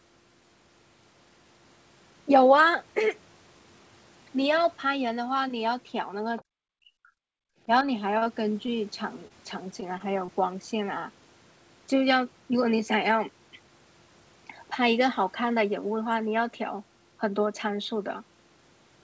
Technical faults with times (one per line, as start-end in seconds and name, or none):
6.38-6.44 other side's voice leaking through
6.44-7.12 speech suppressed in double talk
7.40-7.60 background gated by the echo canceller
8.18-8.30 short stall from a late packet
8.23-8.27 short concealed packet loss
8.66-8.70 short concealed packet loss
9.28-9.32 short stall from a late packet
9.80-9.84 short stall from a late packet
9.98-10.30 short concealed packet loss